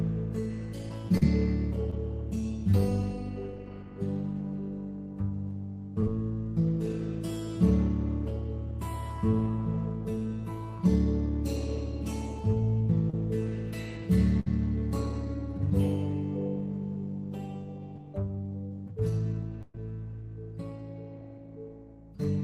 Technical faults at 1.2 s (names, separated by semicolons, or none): short concealed packet loss